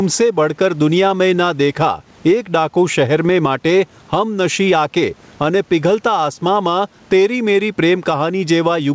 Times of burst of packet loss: none

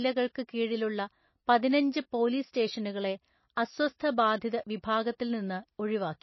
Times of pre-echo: 0.34

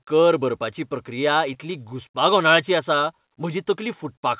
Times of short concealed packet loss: 1.54-1.57

